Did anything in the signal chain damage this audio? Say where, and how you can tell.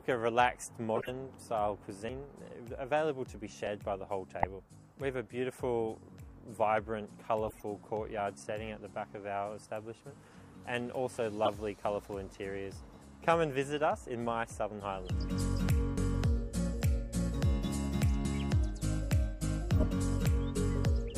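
Yes, at two stages: the codec's decoder and the capture buffer.

Corrupt frame decoded: short chirps and noise bursts at 0.95–1.11 s, 4.43 s, 7.45–7.63 s, 11.45–11.48 s, 16.81 s and 19.76–19.86 s. Each is an isolated blip of misplaced spectral energy lasting one to several codec frames; the longer ones span a run of a few frames. This points to bit errors in the compressed stream: the decoder played the damaged frames, misreading gains and codes and scattering energy across the wrong frequencies until the next clean frame.

Dropped buffer (overrun): abrupt jumps forward in the sound, with no gap of silence, at 2.09, 3.67, 15.98, 18.25 and 20.25 s. At 2.09 and 18.25 s roughly a tenth of a second of material is missing; at the other three about 50 ms. The likely cause is the capture side not draining its buffer in time, so the hardware overwrote a block and the surrounding audio was spliced directly together, producing the discontinuity.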